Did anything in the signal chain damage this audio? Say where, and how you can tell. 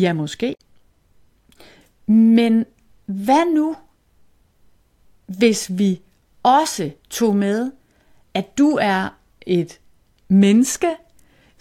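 Yes. A brief glitch cuts through the speech from 0.51 to 0.60 s, about 90 ms. This is damaged data in a compressed stream at the codec or storage stage: corrupted bytes made the decoder misread frames, lose sync and hunt for the next valid header.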